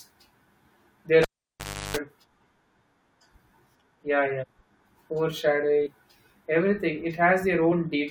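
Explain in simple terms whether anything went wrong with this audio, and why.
Between 1.22 and 1.97 s, you get a textbook case of a cable pulled and plugged in while the line was live. There's a pop, then the speech drops out for about 0.69 s, then roughly 0.34 s of low 50 Hz mains buzz while the plug was only half in and the tip was touching. Another pop follows as the signal comes back. Nothing in the audio itself caused it. Someone physically yanked and reseated a lead.

The other problem is compressed frames skipped, heard at 4.42 to 4.44 s, 5.85 s and 7.71 s. Each time, the speech hops forward by a small chunk: about 40 ms, about 70 ms, and about 20 ms. Those jumps are multiples of a 21.3 ms block, which fits the player dropping two, three and one frame of the compressed file.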